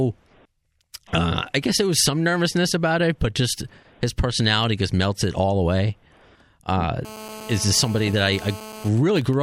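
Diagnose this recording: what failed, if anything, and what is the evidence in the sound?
From 7.05 to 8.89 s, a raspy 217 Hz buzz with many harmonics sits about 17 dB below the speech. This is GSM phone buzz from an active call, rectified in the analogue wiring.

From 8.97 to 9.34 s, even ticks with a longer 217 Hz buzz twice a second are heard, roughly 20 dB down. These are GSM signalling bursts from a call with the talker silent, rectified by the same analogue stage.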